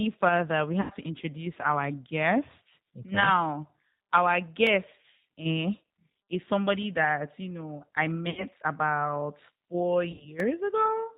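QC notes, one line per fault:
throughout: G.729 codec. Speech has no content above 4 kHz and sounds rough and synthetic from the 8 kbit/s pulse-based rebuild. This is a constant colouring, not a momentary break.
0.81–0.92 s, 8.30–8.44 s (after "that you know I", before "about four"), 10.12–10.27 s (after "about four"): VoIP packet loss concealed by the speech codec. Each is stretched sound that fades rather than going silent, because the decoder extrapolates its last pitch and filter. The first points to about 90 ms lost, the later two to about 70 ms.
4.67 s and 10.40 s (after "about four"): block of digital silence. Each is a hard 2.7 ms dropout, heard as a tick or dip, with no buzzy fill or fade, which fits a missed 128-sample buffer.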